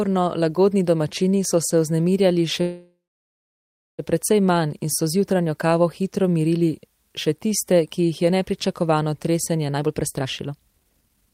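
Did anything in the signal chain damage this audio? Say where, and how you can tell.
Yes, two spots. At 2.61 to 4.01 s, right after "domačini so se vznemirjali", there's a call audio freeze: a brief fading fill, then about 1 s of silence, and the audio resumes at "precej manj in so" with nothing lost. That's likely network packets stalling and the jitter buffer running dry, adding 1.37 s of delay.

Then a jitter buffer speed-up, from 9.72 s after "jih je nepričakovano tresenje" to the end at 11.33 s. The receiver's buffer was trimming its backlog by cutting pitch-period slices, so the speech runs at about 145% with the pitch unchanged and sounds rushed, with roughly 0.7 s dropped.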